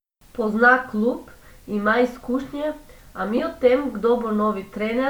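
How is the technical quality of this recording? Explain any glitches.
One glitch in this speech recording: a corrupt frame decoded at 3.37 to 3.40 s, between "klub ima izkušnje a" and "o tem". Flipped bits in a single compressed frame were decoded anyway, misplacing energy into a brief squeaky burst peaking around -10 dBFS.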